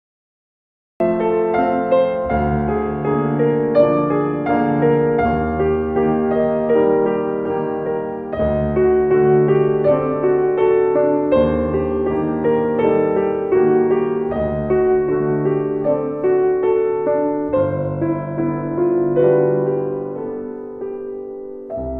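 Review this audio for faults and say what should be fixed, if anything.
The clip has a cut-off start. From 0 to 1.00 s there is only digital silence, and at 1.00 s the sound appears abruptly, already in progress, with no attack and no fade-in. The recording began late, so whatever led into that moment was never captured. Unlike a dropout, the gap sits at the very beginning rather than interrupting ongoing sound, and unlike a gated or slow-attack onset, the sound enters at full level. To prevent it, start recording before the source begins, keeping a short pre-roll.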